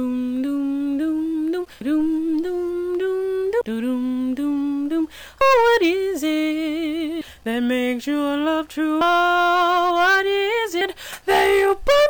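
Abrupt skips every 1.8 s, at 1.81, 3.61, 5.41, 7.21, 9.01 and 10.81 s, each jumping ahead about a fifth of a second, likely audio missing between 2 s chunks.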